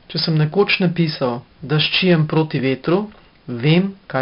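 From start to end the speech carries 4-bit ADPCM compression damage, and it is heavy. Each sample has been coded as a coarse step from a prediction, so a gritty hiss rides on every loud syllable and drops away in pauses, with roughness on hard consonant onsets. Nothing reaches above about 5.3 kHz, consistent with a rate near 44 kbps. Unlike a steady noise floor, the hiss tracks the level, and it lacks the warbling of perceptual codecs.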